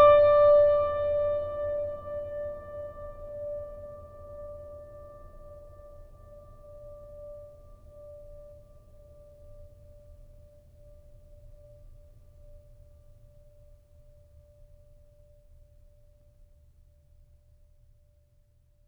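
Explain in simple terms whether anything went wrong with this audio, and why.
Nothing went wrong that I could hear; listening to the music, nothing stood out as a problem.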